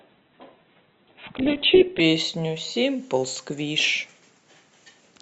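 For the first 2.0 s the speech sounds dull and smeared, with nothing above about 4.3 kHz, then it snaps to full clarity without a gap. That is an adaptive stream starting at a low bitrate, which fits a very lean Opus stream before the player stepped up.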